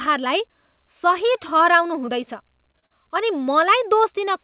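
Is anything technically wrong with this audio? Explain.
Yes. Short concealed packet loss occurs four times: at 2.06 s, 2.72 s, 2.79 s and 2.86 s. Pieces of the stream, about 20 ms each and 40 ms in the last case, arrived too late for the decoder, so the receiver patched each gap with 14 to 41 ms of sound extended from the preceding audio, then eased back into real audio. Each event sounds like a brief smear or wobble within the narrowband audio, which tops out at 4 kHz as a G.711 A-law call would.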